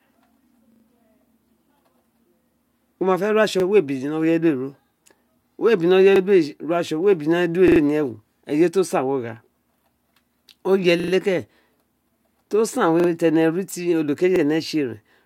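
Repeated buffers stutter the speech at 0.72, 3.6, 6.16, 7.68, 11.0, 13.0 and 14.36 s. New audio arrived late, so the last block replayed one to three times with hard joins 40 ms apart, which fits a 40 ms buffer. Each stutter lasts up to 0.12 s.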